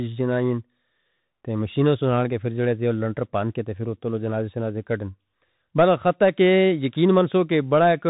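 From start to finish the speech passes through a Bluetooth CVSD headset codec, and the damage is plainly audible. Each sample is coded as a single up-or-down bit with an adapting step, which fits a 64 kbps stream. On a spectrogram everything stops at about 3.8 kHz. S sounds turn scratchy, loud bright moments smear where the step cannot keep pace, and a granular hiss sits under the speech, visible as a grainy floor between syllables.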